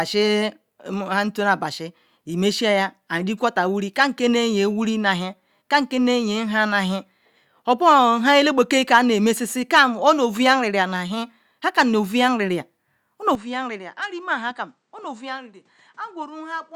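At 13.35 s the speech changes character abruptly and stays that way to the end: everything above 9.4 kHz disappears, the level drops by around 10 dB, and a new, faint noise floor appears, roughly 45 dB under the speech. There is no gap at the transition. The narrower band, lower level and different background point to an input switched to a poorer device, most likely another microphone or a headset in its call profile taking over mid-recording.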